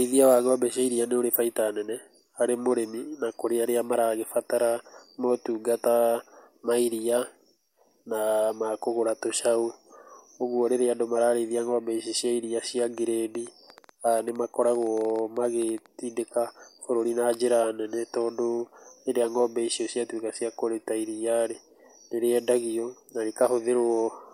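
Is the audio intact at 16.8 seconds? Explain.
Yes, the speech at 16.8 seconds plays through intact, with no fault to be heard at that moment.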